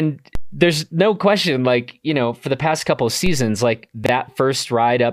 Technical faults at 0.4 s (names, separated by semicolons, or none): DC step